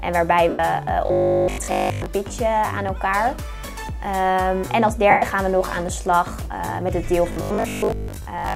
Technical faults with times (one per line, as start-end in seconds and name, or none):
0.49-0.59 lost LE Audio frames
1.06-2.06 robotic sound from repeated short buffers
5.10-5.22 lost LE Audio frames
7.32-8.54 robotic sound from repeated short buffers